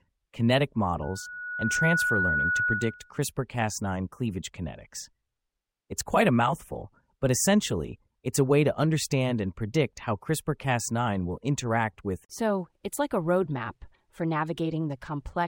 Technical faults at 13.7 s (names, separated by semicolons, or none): none